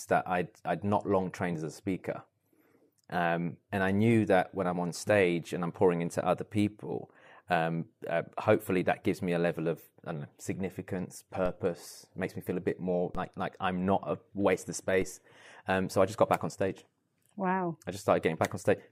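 Speech, with three DC steps at 11.46 s, 13.15 s and 15.02 s. At each one the waveform's zero line jumps abruptly by about -29 to -30 dBFS, then drifts back toward centre as if through a high-pass around 5 Hz. Each is heard as a low thump beneath the unchanged speech. On the waveform the trace lifts off centre and relaxes back over a fraction of a second. A spectrogram shows a brief broadband click line with energy pooled at the very bottom.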